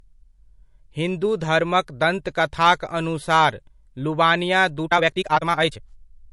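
A speech clip whose whole length is low-bitrate audio saved at a high bitrate: the swirly, watery artefacts of a low-rate MP3 (fitting about 48 kbit/s) remain, likely re-encoded at a much higher rate that restores none of it. After "धर्मक दन्तकथाक अनुसार लुवानिया", from 4.81 s to the end, there is a time-stretched section sped up about 1.97 times at unchanged pitch, likely from stretching software. It sounds rushed, and the waveform's syllable envelopes suddenly crowd together.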